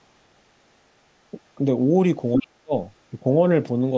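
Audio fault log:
2.34–2.39 s, other side's voice leaking through: A short scrap of a second voice pops up here, roughly as loud as the talker. It sounds like the far end playing on the loudspeaker and getting back into the microphone, most likely because the echo canceller didn't remove all of it and let a bit of it through. It's only about 50 ms long.
2.36–2.73 s, speech suppressed in double talk: Right as that leak appears, the talker gets pushed way down, a drop of something like 35 dB at the deepest point, with about 0.4 s of audio affected. That points to the echo canceller likely being confused by both sides talking at once and clamping everything down. The band tops out around 8 kHz throughout, which is just the call path's normal limit.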